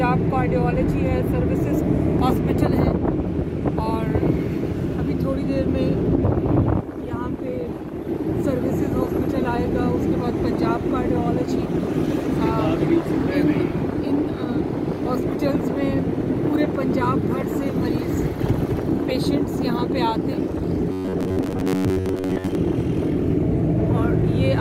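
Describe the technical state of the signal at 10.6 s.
At 10.6 s the signal is intact, with no audible fault at that moment.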